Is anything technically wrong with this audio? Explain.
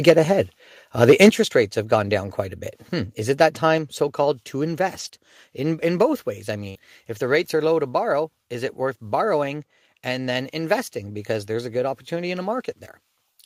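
Yes, there are four kinds of fault.

Microphone overload occurs at 0.08 to 0.11 s and again at 1.02 to 1.29 s, ending just before "rates have gone down". The likely cause is an input level set too high, driving peaks about 5 dB past the converter's limit so their tops are flattened. The first instance clips a large share of its samples, the second a smaller share. Both give the loudest moments a harsh, crackling edge.

Microphone volume stepped down three times: at 0.1 s by about 2 dB, at 1.29 s by about 6 dB, and at 3.78 s by about 4 dB, just after "it that". This is likely the call software's automatic gain control reacting to a level it judged too hot, cutting the device input in a single step. The first two follow directly on the clipped peaks. Each is heard as a sudden drop in level of everything picked up, background included.

A lost packet rebuilt from error correction appears at 4.99 to 5.13 s. 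The audio points to several separate lost packets. Each was replaced by the low-bitrate redundant copy carried in the following packet, totalling 80 ms of reconstructed audio. Because the decoder had that copy to work from, there is no gap. The stretch instead sounds rougher and noisier than its surroundings, with a grainier texture while the substitute frames play.

A burst of packet loss falls at 6.69 to 6.77 s, between "in both ways I" and "if the rates are". Audio failed to arrive in time, and the receiver concealed it by extending the last sound for 56 ms while fading it down. That produces a brief held buzz or fading hiss in place of real content. Playback then resumes about 60 ms further on, so that part of the signal is simply missing.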